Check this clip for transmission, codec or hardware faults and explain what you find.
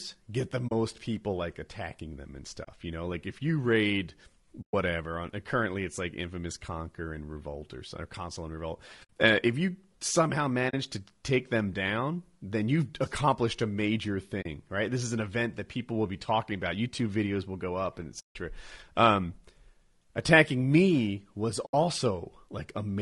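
The speech has a steady codec roughness throughout, plus eight short dropouts where the sound fades away and comes back.

The roughness sounds like low-delay AAC compression, likely AAC-ELD at a rate around 32 kbps. That codec works in very short frames, so it can't separate the pitch harmonics finely and spends bits less efficiently. Here that comes across as a grainy, rough voice with hiss filling the gaps between harmonics and a thin, slightly artificial top end, and it's plainly audible.

The dropouts are AAC frame loss with muting, at 0.67 s (between "get the" and "people like attacking them"), 2.63 s, 4.61 s, 9.03 s, 10.69 s, 14.41 s (between "you've accomplished a major" and "right this is an"), 18.19 s and 21.65 s (just after "attacking me was"). Whole frames went missing and the decoder zeroed them, so the overlapping windows ease the sound down and back up instead of cutting hard. 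That gives soft-edged holes. Half last about 40 ms, and the longer ones run 60, 80, 120 and 160 ms, which fits frames of about 20 ms each.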